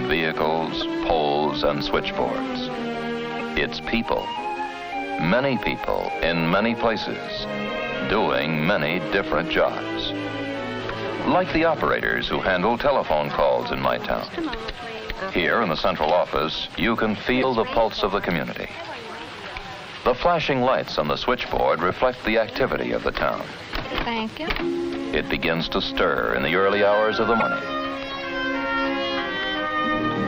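A likely broken MP3 bit reservoir, with frames lost so that the following frame decodes from another frame's borrowed bytes. The audio jumps forward and leaves brief glitches, roughly one 26.1 ms frame long, at 0.80–0.83, 3.38–3.41, 17.41–17.44, 24.47–24.50 and 27.39–27.42 s.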